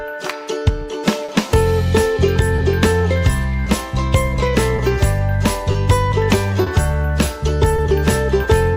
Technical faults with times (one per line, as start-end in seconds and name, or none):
0.00-8.77 clock drift between sender and receiver
1.25-1.30 short stall from a late packet
2.56-2.60 short stall from a late packet
4.76-4.80 short stall from a late packet
6.64-6.68 short stall from a late packet
7.76-7.80 short stall from a late packet
8.74-8.77 short stall from a late packet